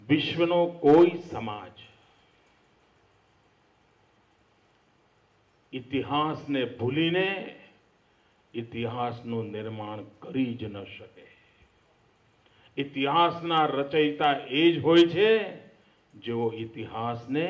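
Nothing here trips the ear at all; there's not a single technical fault to point to anywhere in the clip.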